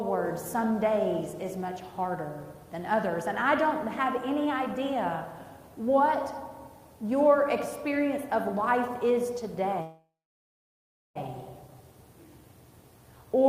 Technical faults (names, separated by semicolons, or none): call audio freeze